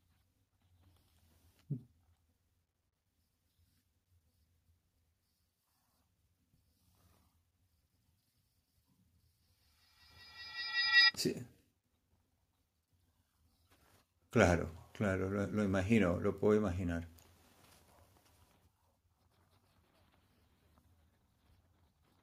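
From 9.42 to 11.17 s a feedback howl rises to about 3 dB above the speech, centred near 2 kHz and pulsing roughly every fifth of a second. A sound loop is gaining level on each pass. A spectrogram shows a bright narrow band thickening, and the waveform swells in regular bursts.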